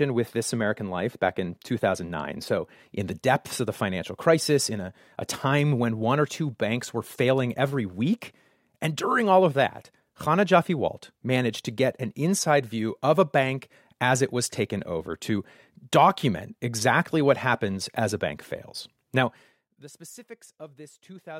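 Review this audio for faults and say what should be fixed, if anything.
Nothing here needs fixing: I couldn't hear any fault anywhere in the speech, so there's no repair to make and nothing to prevent.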